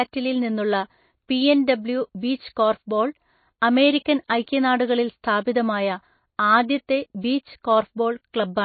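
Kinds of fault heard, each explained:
MP3 compression: The whole clip has a plainly audible watery, swirly texture, where weak frequency lines drop in and out between frames. That's likely a lossy MP3 encode, and the damage points to a very low bitrate, around 24 kbps.
Pre-echo: Two sharp attacks, at 4.05 s and 4.28 s, each get a brief hiss just before them, lasting 11 ms and 19 ms. The codec spread its quantisation noise across the block, so the noise meant for the loud attack leaks into the quiet moment before it and softens the onset.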